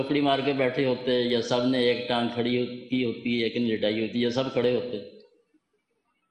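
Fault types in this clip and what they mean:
Clock slip clicks: Ticks recur about every 0.15 s, some forty of them, from 0.14 s to 6.24 s. Each one is a single sample dropped or repeated. The likely cause is two devices on unmatched clocks, drifting apart by roughly 150 parts per million.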